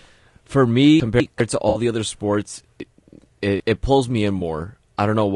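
Throughout, the speech sounds rough and grainy, with noise between harmonics and a thin top band. The likely cause is low-delay AAC compression (AAC-ELD) at a low bitrate, about 32 kbps.

From 1.0 to 1.4 s, chunks are out of order. A 200 ms chunk plays one chunk late, causing a jumbled moment.

From 1.69 to 1.79 s, just before "the other sports", AAC frame loss with concealment fills a 60 ms gap with a smeared, noisy patch.

From 2.8 to 3.6 s, between "the other sports" and "it pulls me in", a 200 ms chunk arrives three chunks late. The passage sounds scrambled.

From 4.39 to 4.42 s, after "it pulls me in", a brief 20 ms frame loss leaves a small phasey smear.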